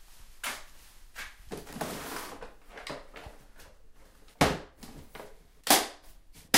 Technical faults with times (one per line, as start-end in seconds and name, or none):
1.73 block of digital silence